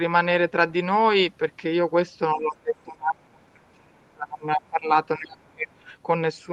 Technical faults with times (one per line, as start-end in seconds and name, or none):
2.34-4.90 speech suppressed in double talk
4.00-4.10 other side's voice leaking through
5.17-5.88 speech suppressed in double talk